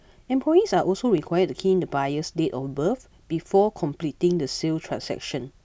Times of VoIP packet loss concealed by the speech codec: none

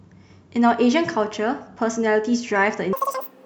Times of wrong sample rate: 2.93-3.45

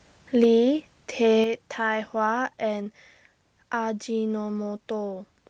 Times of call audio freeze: none

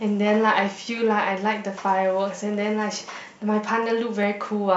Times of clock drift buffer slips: 0.66-4.23

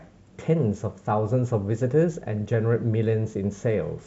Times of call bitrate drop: none

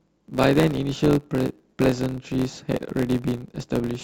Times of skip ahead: none

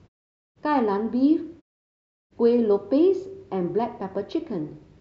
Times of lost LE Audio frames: none

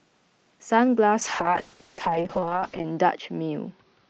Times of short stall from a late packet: none

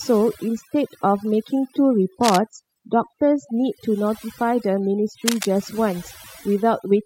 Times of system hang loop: none

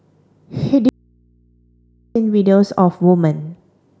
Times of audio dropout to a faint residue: 0.89-2.15

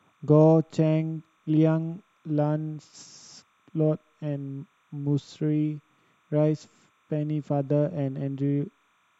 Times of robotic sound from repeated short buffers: none

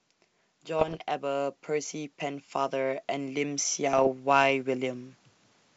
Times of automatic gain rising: 0.66-5.09

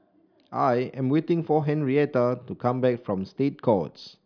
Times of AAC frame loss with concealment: none

